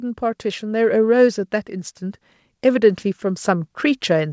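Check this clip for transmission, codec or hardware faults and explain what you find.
One fault appears twice: automatic gain rising. From 0.19 to 1.17 s, and again from 1.68 s to the end, the gain control judged the input too quiet and raised its gain gradually, by about 4 dB in the first rise. Speech and background swell together. The call path shows nothing above 8 kHz, which fits G.722 at 64 kbps.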